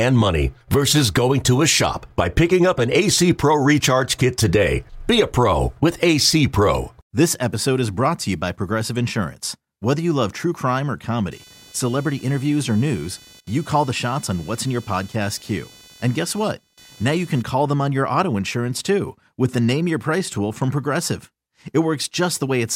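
Shifting processor, graphics or mouse load disturbed the shared ground of the audio circuit from 11.31 s to 17.42 s, just after "love true crime or" and ending before "call them on your". This computer activity noise comes through as a buzzy, chirping rasp pulsing at around 500 Hz, sitting roughly 25 dB below the speech. Its rhythm tracks the machine's workload rather than the talker, so it flickers independently of what is being said.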